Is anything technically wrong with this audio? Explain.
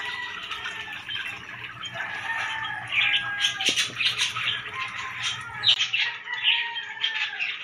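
Yes. From 5.74 s to the end, the input likely switched to a poorer device. After a 20 ms gap, nothing passes above 6.9 kHz, so the sound turns dull, over a faint new noise floor at unchanged loudness.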